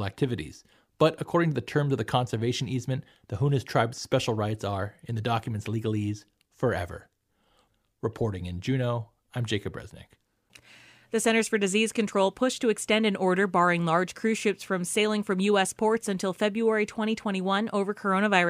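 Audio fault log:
No faults detected; the speech shows no audible defects anywhere in the recording.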